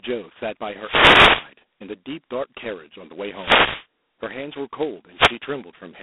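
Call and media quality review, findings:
G.726 ADPCM, whole clip: harsh rasping hiss riding on speech level, band roughly 250 Hz to 3.6 kHz, nothing above 3.8 kHz. Coarse difference coding against adaptive prediction; heavy grit points to the 16 kbit/s, 2-bit-per-sample mode.

Wireless microphone noise hit, 0.78 to 1.53 s, 3.30 to 3.87 s, 5.13 to 5.38 s: short swishes of static over speech. Analogue FM radio link fading as reflections cancel; receiver noise rises through each dip.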